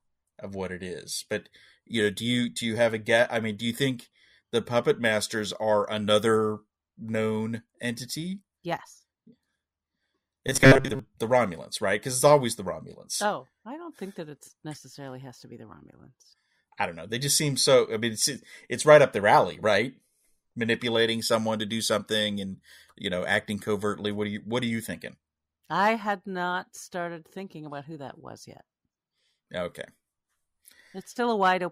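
Speech, with robotic sound from repeated short buffers between 10.48 and 10.99 s. The voice becomes a rigid, metallic buzz near 134 Hz. Most of the audio in that span is a repeat. A short buffer, about 7.5 ms, was likely looped while new audio arrived too slowly.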